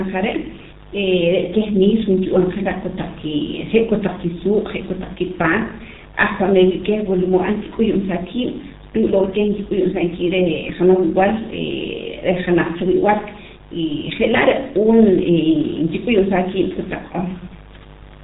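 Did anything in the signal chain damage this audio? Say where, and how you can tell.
Yes, at the codec stage: G.723.1 coding throughout leaves nothing above 3.8 kHz, with hoarse, smeared consonants that a plain low-pass filter wouldn't produce, fitting roughly 6 kbit/s.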